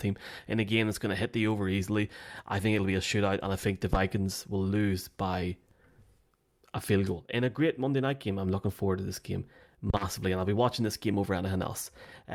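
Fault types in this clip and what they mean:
Phantom power thump: two deep, brief thumps in the speech, decaying within 12 ms and 55 ms, from a supply switching on a live input through the coupling capacitors.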